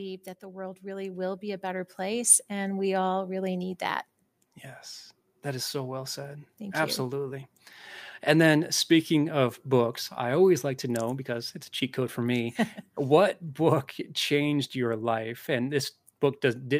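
From 0.4 s to 2.37 s, automatic gain rising lifts the level by about 9 dB as the control, judging the input too quiet, steadily raises its gain. Speech and background noise swell together over those two seconds, settling just before "and we all really".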